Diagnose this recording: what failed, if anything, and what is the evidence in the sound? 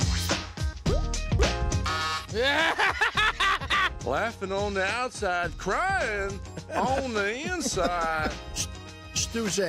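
Nothing failed at any stage of the chain in this recording. The sound gives no evidence of a fault that would call for a diagnosis.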